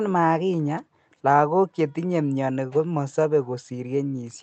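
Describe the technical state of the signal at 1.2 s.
At 1.2 s the speech signal is intact, with nothing beyond the ordinary coding texture of the call path it passed through.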